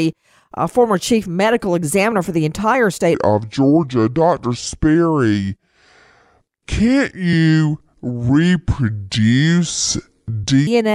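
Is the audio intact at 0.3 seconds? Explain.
Yes, the speech at 0.3 seconds is intact, with no dropout, click, distortion or other fault at that moment.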